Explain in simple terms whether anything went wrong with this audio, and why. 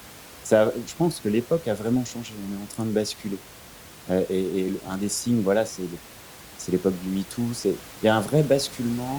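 Nothing stood out as going wrong on listening to this speech recording; the faint room noise in the background sits well below the talking and is simply part of the place where it was recorded, not a problem with the system.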